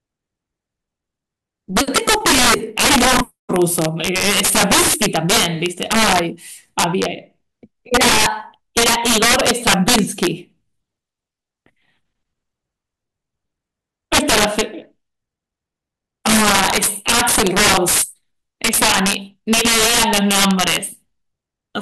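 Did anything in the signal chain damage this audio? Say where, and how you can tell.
Yes, integer overflow in the sample-format conversion: the speech is driven about 10 dB too hot, and a few percent of samples wrap to the opposite sign, giving harsh cracks throughout.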